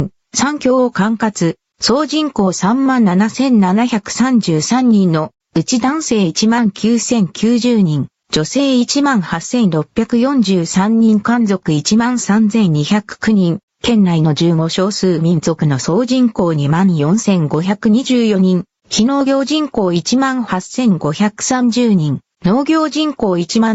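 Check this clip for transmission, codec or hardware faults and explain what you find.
One fault runs through the whole clip: gain pumping, with the level swinging by roughly 15 dB. The likely cause is input gain set far too high, with a fast limiter or compressor pulling it down on each loud sound and letting it recover between them. The result is squashed dynamics and a breathing, up-and-down level. On a waveform, the envelope looks flattened, with gaps that rise and fall. A spectrogram shows the band below 8 kHz brightening and dimming together as the gain moves.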